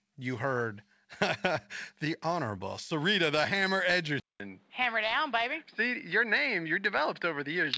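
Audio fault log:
4.20–7.77 s, input switched to a poorer device: after a 200 ms gap the sound turns duller and boxier, losing everything above 5 kHz where the earlier part reached up to 8 kHz, as expected for a wideband call codec such as G.722. A faint new background hiss sits far beneath the signal, while the loudness stays about the same. The likely cause is the recording shifting mid-take to a lower-grade microphone or a headset's call profile.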